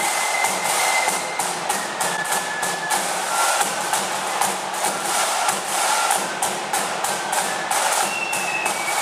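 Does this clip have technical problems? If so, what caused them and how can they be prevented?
Yes. From 2.16 to 2.19 s the sound briefly garbles and skips ahead, spanning about one 26.1 ms frame. The likely cause is a broken MP3 bit reservoir: after missing frames, the next frame borrowed bits that were gone. Unlike a plain dropout, the sound resumes further along rather than where it stopped. Prevent it by editing or splitting only decoded audio, or with reservoir-aware MP3 tools, and by ensuring no frames are lost in transfer.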